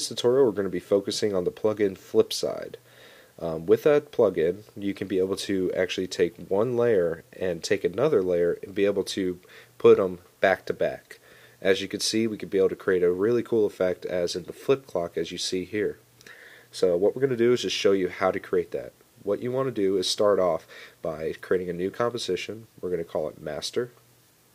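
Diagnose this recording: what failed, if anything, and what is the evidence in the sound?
Nothing failed: no stage in the chain, from wiring and conversion through processing, transport, storage and playback, leaves an audible defect anywhere in the recording.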